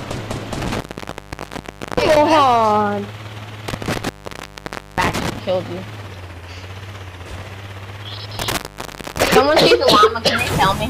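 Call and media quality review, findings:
Intermittent contact, three events: 0.61–2.17 s (open 1.18 s), 3.68–5.39 s (0.89 s), 8.39–9.35 s (0.60 s). Probable component: loose cable or plug. Signal path opens, audio drops out, and only faint hiss remains until contact returns. Crackle at each break and remake separates it from packet-loss dropouts, which cut cleanly to digital silence with no scratchy edges.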